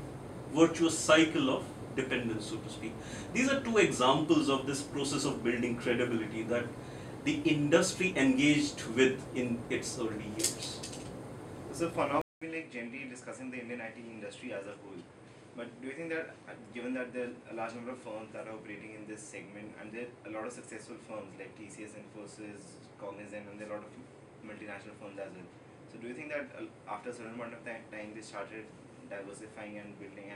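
At 12.21 s the audio drops out for 0.2 s. It returns about 10 dB quieter, with nothing above 10.6 kHz and new background noise. The input likely switched to a poorer device.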